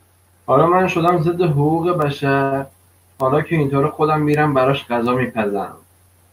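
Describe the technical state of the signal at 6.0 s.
At 6.0 s the speech signal is intact, with no audible fault at that point.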